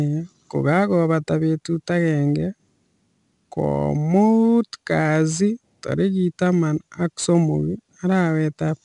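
From start to finish this speech runs through 4-bit ADPCM compression, and the damage is easy to hear. Each sample gets squeezed into a small step from a predicted value, so the leftover error rides along as a gritty hiss that swells with every louder syllable, with roughness on sharp onsets. Nothing sits above 10.7 kHz, which points to a sample rate near 22 kHz and fits a stream of about 89 kbps.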